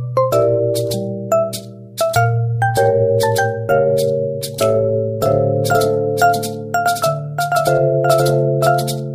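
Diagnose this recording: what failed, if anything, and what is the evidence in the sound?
From 5.26 s to the end, a doubled audio track: an equally loud, full-band copy trails by about half a second, dry and starting abruptly, likely from a second, slower capture path mixed in. On a spectrogram, every event repeats as an identical twin shifted right.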